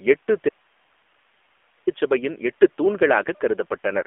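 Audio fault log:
Throughout: AMR narrowband mobile codec. The audio is confined to roughly 300 Hz to 3.5 kHz, with nothing above 4 kHz. At 7.4 kbps the pulse-excited vocal tract model leaves plainly audible buzzy, synthetic colouring on the speech.
0.49–1.87 s: audio dropout to a faint residue. The speech cuts off abruptly for about 1.38 s and returns just as suddenly. Only hiss, about 40 dB below the signal level, fills the gap, so the path downstream likely stayed live while the source was lost.
1.00–1.02 s: lost AMR speech frame. A single 20 ms frame is missing. The decoder repeats the previous pitch and vocal tract settings at reduced gain, leaving a brief dip or warble at that point. Because it falls inside the dropout, it sits within the hiss.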